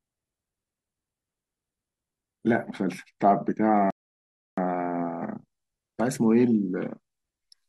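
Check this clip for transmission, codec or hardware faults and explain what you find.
Two faults turn up in this speech clip, both beginning just before the 4-second mark.

From 3.77 s to the end, pre-emphasis is left on. The treble boost of the CD 50/15 µs curve was applied but the matching de-emphasis never followed, so content near 10 kHz sits about 8 dB higher relative to 1 kHz than it should. The speech turns thin and bright, with sharpened sibilants. On a spectrogram the upper bands visibly brighten from 3.77 s onward, a tilt that persists to the end.

From 3.90 to 4.58 s there is a rebuffering stall. The player exhausted its downloaded audio and paused until more data arrived, inserting 0.67 s of silence. The speech then resumes exactly where it broke off, so nothing is missing, but the timing stretches. The waveform shows a flat, empty gap with abrupt edges, and the spectrogram shows a clean vertical blank band across all frequencies.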